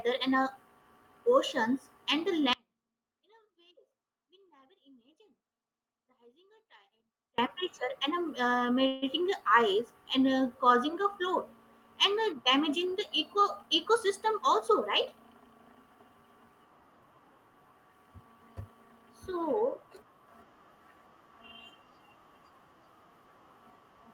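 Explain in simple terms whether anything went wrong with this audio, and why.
Two things go wrong in this speech clip.

The first is an audio dropout to a faint residue. It runs from 2.53 s to 7.38 s, nearly five seconds. The voice cuts out suddenly, mid-flow. It does not fade. Only a very faint trace of sound stays in the gap, far quieter than normal. Then the speech snaps back. The likely cause is that the wanted signal was lost while the line itself stayed open.

The second is a call audio freeze, from 8.87 s to 9.04 s. For about 0.15 s, the last sound is stretched out as a short hold that fades. There is no silence. Then the speech carries on from exactly where it stopped. Nothing is missing. A small delay has been added instead. The likely cause is that data was held up in transit and the receiver ran out of audio to play.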